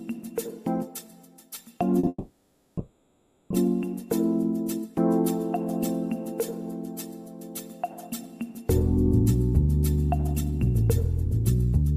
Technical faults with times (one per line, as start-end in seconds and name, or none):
1.99-2.05 short stall from a late packet
2.08-3.52 call audio freeze
10.18-10.59 jitter buffer speed-up